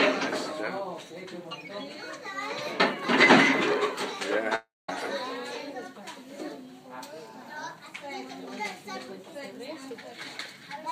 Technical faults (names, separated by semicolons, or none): long network dropout